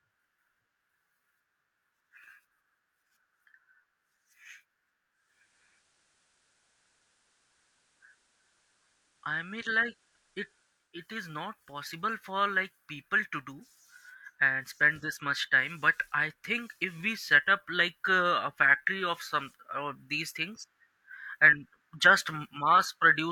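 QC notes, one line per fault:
5.08–11.05 s digital radio blending to analogue: faint hiss appears and level shifts about 1 dB as the receiver cross-fades to FM over 0.46 s.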